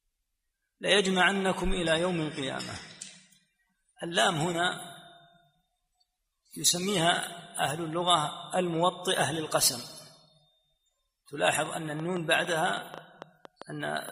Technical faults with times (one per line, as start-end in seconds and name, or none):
11.53-14.10 train of clicks